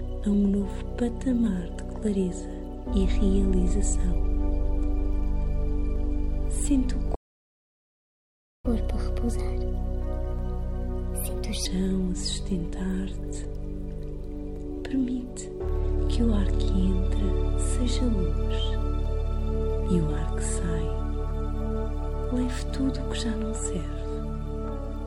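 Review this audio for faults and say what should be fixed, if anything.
Clock drift buffer slips: a click recurs every 1.12 s from 0.34 s to the end of the clip. This is likely two clocks disagreeing by a few hundred ppm, so the buffer drops or repeats a handful of samples at each slip. Lock both devices to one clock or add asynchronous sample-rate conversion.

Playback stall: the output goes silent from 7.14 s to 8.66 s, a gap of about 1.5 s, and then resumes. The likely cause is a player starved of data or a blocked audio thread. Enlarge the buffer and keep blocking work off the audio thread.

Catch-up at higher speed: from 8.66 s to 11.66 s the audio plays at 1.25x speed, pitched up by about four semitones, while the player resamples its backlog to recover some of the lost time. It then returns to normal. Avoid the stall, or catch up gradually with time-stretching that preserves pitch.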